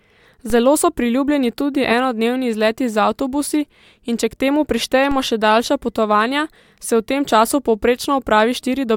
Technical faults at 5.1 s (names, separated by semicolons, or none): DC step